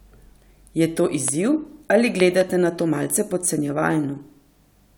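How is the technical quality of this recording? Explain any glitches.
The recording is marred by two loud pops in the speech. An electrical pulse, likely from a plug, switch, static discharge or driver glitch, was added to the signal, and the following circuitry shaped it into a short burst. The first, from 1.28 to 1.30 s, is a single sharp pop about 10 dB above the speech. The second, from 2.20 to 2.43 s, is a double pop about 15 dB above it. In both, the speech continues underneath.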